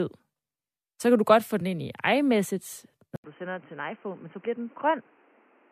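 At 3.16 s the speech cuts out for 80 ms. When it returns, it sounds dull and boxy. Nothing remains above 3.2 kHz, and the level drops by about 5 dB. A new background noise sits roughly 30 dB below the speech. The change lasts to the end of the clip. The likely cause is that the input switched to a poorer device, such as a headset's call profile, which passes a narrower band and has its own noise.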